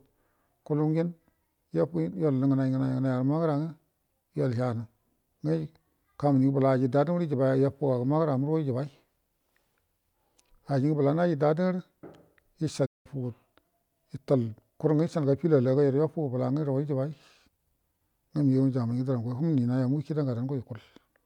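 A speech recording with a playback stall from 12.85 to 13.06 s: the sound cuts out mid-flow for about 190 ms, most likely because the player ran short of data or its thread was blocked. A waveform shows a flat line there, a spectrogram a blank vertical band.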